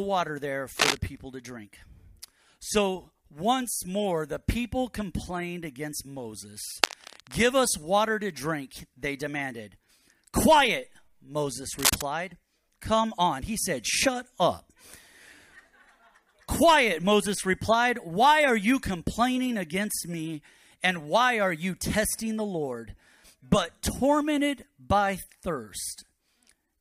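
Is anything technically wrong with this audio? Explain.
Yes. There are three bursts of cable scratch noise, at 0.73 to 0.97 s, 6.64 to 7.43 s and 11.78 to 12.02 s. Each one is a dense, uneven rush of scratchy, rustling noise laid over the sound. The first and third are short, about a quarter second each, and sit roughly level with the signal. The middle one lasts closer to 0.8 s and sits a little under it. The likely cause is a worn cable, connector or control carrying DC being moved, with its contact resistance jumping around as it shifts.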